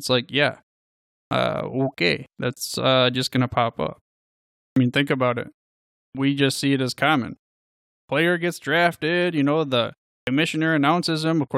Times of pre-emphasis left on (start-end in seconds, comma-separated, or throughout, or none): none